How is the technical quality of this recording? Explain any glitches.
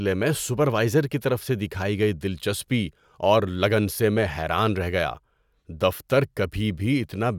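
The speech recording has no technical glitches to explain, as the signal runs continuously with nothing interrupting or disturbing it at any point.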